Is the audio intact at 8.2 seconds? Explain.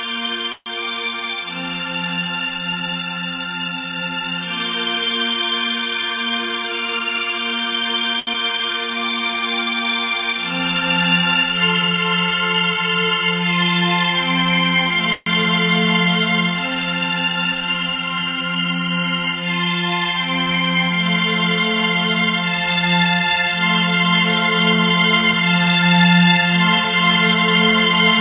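No, a late packet left the jitter buffer empty from 8.19 to 8.29 s, a short stall: the previous sound is stretched about 75 ms, then resumes without loss.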